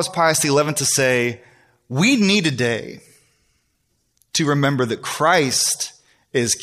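Pre-echo at about 4.33 s. A short hiss rises about 11 dB, roughly 12 ms before a sharp speech attack. The codec spread its noise across a whole block, which fits a 26 ms window with no switch to short blocks. The attack sounds smeared.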